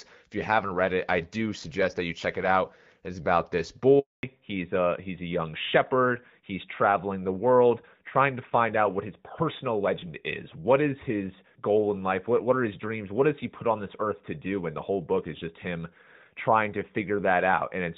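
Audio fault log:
3.99–4.23 s, handover gap: the speech drops out for 240 ms, fading to nothing within a few tens of milliseconds and staying silent until the signal resumes. This is the sound of the call being passed from one network to another with no speech frames delivered while the link was being switched, so whatever was said in that quarter-second is simply missing rather than muffled or garbled.
4.23 s to the end, fallback to narrowband: right after the gap the bandwidth collapses, with nothing above 4 kHz for the rest of the clip. Sibilants lose their edge and the voice turns duller and rougher. Before the gap the audio carries the fuller band and only light coding texture of HD Voice, consistent with AMR-WB at around 12.65 kbit/s. Afterwards the sound points to the older AMR-NB codec at about 12.2 kbit/s.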